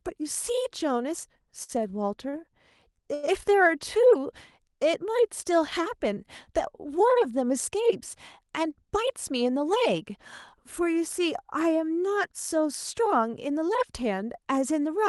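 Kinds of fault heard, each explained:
Short stall from a late packet: Three times a packet came late and the jitter buffer ran dry. The receiver held the last sound until it arrived. This happens at 1.63, 2.29 and 3.14 s, stretching sound by 52, 32 and 86 ms. Nothing is lost.
Jitter buffer speed-up: The buffer had built up extra delay, so the receiver cut tiny pitch-period slices to catch up. Pitch stays the same, but the speech runs faster. From 8.68 to 10.18 s it plays at 104% speed, removing around 70 ms. At 13.48 s it briefly hits 114%.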